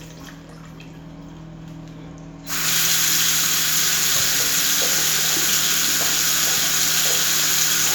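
Nothing technical goes wrong anywhere in these everyday sounds; there's simply no fault to point to.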